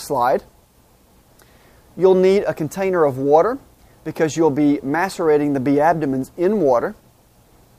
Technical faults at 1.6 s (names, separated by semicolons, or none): none